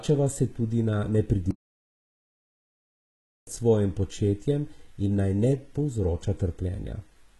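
From start to finish the speech has gritty, metallic sibilants and a synthetic-sounding treble with nothing above about 11.8 kHz, the likely result of heavy HE-AAC compression at a very low bitrate, around 16 kbps. Only the lower band is truly coded. The highs are copied up from it by spectral band replication, so they do not match the real overtones.

At 1.51 s, right after "se tudi na", the sound cuts out completely for about 1.96 s and resumes at 3.47 s with "svojim početjem". This is a playback stall: the player likely ran short of data or was briefly blocked, and output stayed silent until it recovered.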